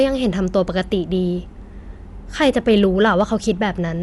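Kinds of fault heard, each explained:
Dolby Digital compression: The speech is dull and band-limited, with no content above about 11.5 kHz. A rough, fluttering noise plainly clings to the voiced sounds. The likely cause is Dolby Digital coding at a low rate, consistent with something near 64 kbps. Such an encoder narrows the bandwidth and leaves many frequency lines without mantissa bits, and the decoder fills those gaps with dither noise, which produces this grainy, unsteady texture.
Hard clipping: From 2.41 to 3.50 s the signal is pushed about 3 dB past what the chain can pass, so the waveform peaks are sliced flat. Those flat tops generate harmonics high in the spectrum that were never in the speech. Here this is heard as a crackling edge on the louder moments of that stretch, with the distortion following the speech peaks rather than running continuously.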